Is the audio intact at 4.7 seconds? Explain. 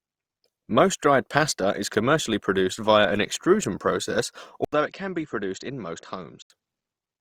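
No. At 4.7 seconds the speech has just come back from a short dropout of about 80 ms and now sounds duller and a few decibels quieter, with nothing above 7.6 kHz and a faint new background noise sitting well below the voice. This lasts from 4.65 to 6.50 s. It is likely an input switched to a poorer device: the system changed its input mid-recording to a narrower-band microphone or headset profile with its own tone, level and noise.

Underneath that, the whole clip, including this moment, carries a grainy, rough texture where tonal parts of the voice turn plainly noisy, though the codec itself passes the full range up to 20.3 kHz. This is likely Opus compression in its music (CELT) mode at a rate that fits about 24 kbps. The codec keeps each band's energy but fills underfunded bands with folded or noise-like content, so detail becomes coarse rather than swirly.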